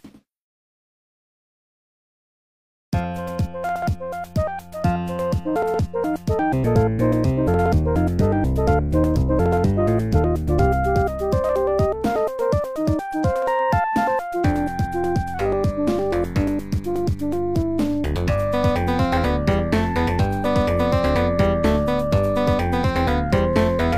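Nothing goes wrong anywhere in this recording; there's no fault to point to at any moment.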